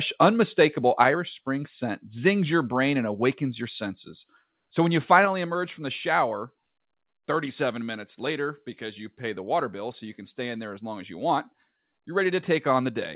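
At 1.00 to 1.02 s the speech peaks clip, pushing about 1 dB past full scale. This is microphone overload, likely from input gain set too high. It adds a brief harsh crackle. At 1.02 s the microphone volume steps down by about 2 dB, likely the call software reacting to that clip. It steps down again by about 4 dB at 5.25 s, between "when you" and "emerge from the shower". Voice and background both drop abruptly. The narrowband call path, with nothing above 4 kHz, carries these faults.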